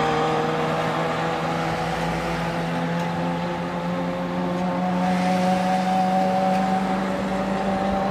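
No technical fault can be heard anywhere in the audio; the signal stays steady and intact throughout.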